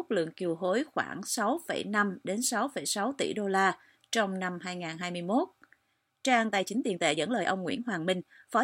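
A short speech clip where, from 6.42 s to the end, a time-stretched section speeds things up about 1.35 times: pace turns rushed while pitch holds, likely from software dropping short slices to fit a length.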